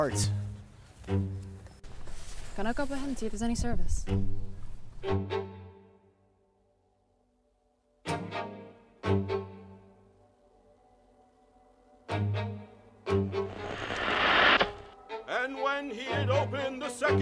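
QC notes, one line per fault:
Nothing here needs flagging; I listened all the way and there's no fault to log.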